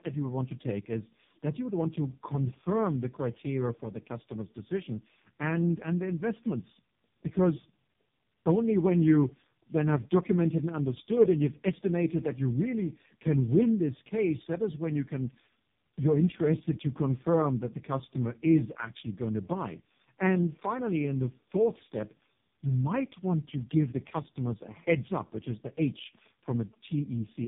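From start to finish the speech carries tandem speech coding. It sounds like it passed through a low-rate narrowband coder, went back out to plain telephone PCM, and was squeezed by a similar coder again. The second coder has to model the first one's artefacts, so the errors stack up. You get a rough, grainy texture, a muffled top end with nothing above 3.7 kHz, and a warbly, watery quality on vowels that fits two AMR-NB stages at low rates.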